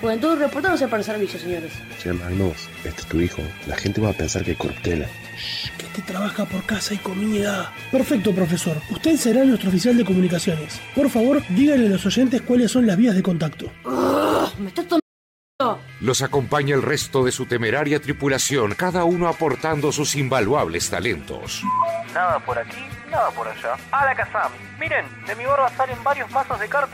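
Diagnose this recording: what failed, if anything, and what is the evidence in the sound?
There's an audio dropout to silence at 15.00 s: the sound cuts off mid-flow and comes back at 15.60 s, leaving about 0.6 s of dead silence with no room tone or noise floor at all. That total blackness is the giveaway. The input side likely lost its signal for a moment, through a dropped device or link or a brief mute, while the recorder kept writing samples, so whatever happened in that gap is simply gone.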